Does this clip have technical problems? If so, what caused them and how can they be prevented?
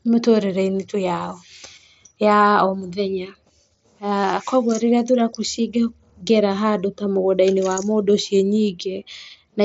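Yes. At 0.76 to 0.78 s the speech has a brief concealed Bluetooth headset packet loss. For about 22 ms, which fits three lost 7.5 ms mSBC frames, the receiver bridged the gap by repeating the best-matching stretch of the preceding waveform. The result is a short, buzzy patch with a slight warble as real audio resumes. The surrounding audio carries the light graininess of the mSBC wideband codec. Prevention: keep the headset close to the phone with a clear line of sight, and reduce 2.4 GHz interference from Wi-Fi and other Bluetooth links.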